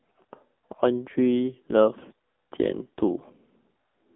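Buzzy, synthetic speech with nothing above 3.6 kHz throughout: the AMR narrowband mobile codec, heavily damaged, as fits a low bitrate near 6.7 kbps.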